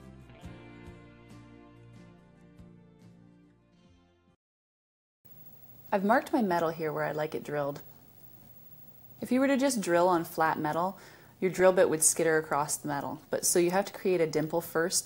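DAB burbling appears from 11.60 to 11.62 s as a brief patch of burbling noise laid over the sound. Weak reception let bit errors, at roughly two in a thousand bits, slip past the error correction into the MP2 audio data. Corrupted samples put short noise blips into single sub-bands.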